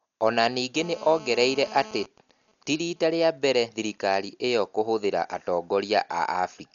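It's a short speech recording, and the whole thing sounds dull and band-limited, with nothing above about 6.9 kHz and a rough, fluttery grain around the voiced parts. That heavy damage is likely Dolby Digital compression at a starved bitrate, something like 48 kbps. The encoder narrowed the band and gave many frequency lines no mantissa bits, and the decoder filled them with noise, which is where that fizzy roughness comes from. On top of that there's GSM phone buzz from 0.76 to 2.05 s, a hard, raspy 217 Hz buzz with lots of harmonics sitting about 18 dB below the speech. A 2G phone nearby was in a call, pulsing its transmitter 217 times a second, and the audio circuit rectified those radio bursts into sound. The buzz is steady and has nothing to do with the speech underneath it. Right after that, from 2.06 to 4.34 s, it changes to GSM signalling bursts: even ticks with a longer 217 Hz buzz twice a second, much fainter, roughly 35 dB down. 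The same phone was still in the call, but its user had gone quiet, so it was only sending short groups of bursts instead of a continuous stream, and the circuit picked those up the same way.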